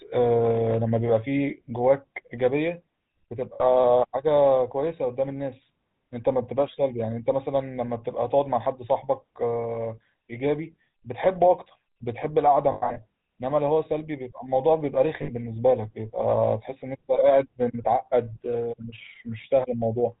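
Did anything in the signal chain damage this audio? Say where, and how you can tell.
Yes. At the codec stage, GSM full-rate coding runs throughout, giving a buzzy, gravelly roughness; the spectrogram shows a hard ceiling with nothing above 4 kHz.

Lost GSM frames, a network fault, at 3.54–3.63 s, 12.72–13.04 s and 15.22–15.32 s: the last good frame repeats as a metallic ring, showing as frozen spectral bands.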